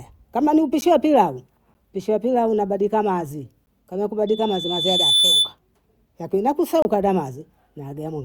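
At 0.81 s, after "kama ni", and at 1.74 s, after "wa pilau", then at 3.66 s, the speech drops into 10 ms blocks of digital silence, likely where the output buffer went unfilled and the samples became zeros. Each is a tick, seen as a flat-line gap in the waveform and a thin vertical stripe on the spectrogram. From 4.27 s, after "pilau unabasilika mazi kama", a loudspeaker feedback squeal sets in. The microphone is picking up its own loudspeaker, and at 3.5 kHz the loop gain exceeds one, so a pure tone builds over about a second to about 5 dB above the speech before ending at 5.54 s. It shows as a single bright horizontal line on the spectrogram. A longer 26 ms block of silence from 6.82 to 6.85 s gives a short hole.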